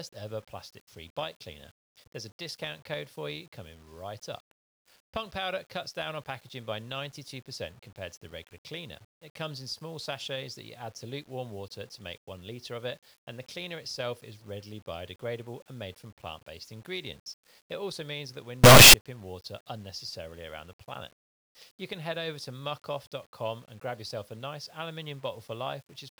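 From 18.64 s to 18.94 s the speech collapses into a burst of very loud, harsh distortion that lasts about 0.3 s, with quiet stretches blasting as hard as the peaks. The likely cause is signed and unsigned mixed up in the 8-bit samples: with the top bit flipped, every zero crossing becomes a jump across the full range.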